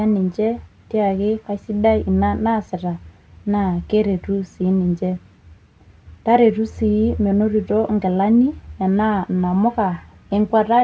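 No technical faults can be heard in this recording.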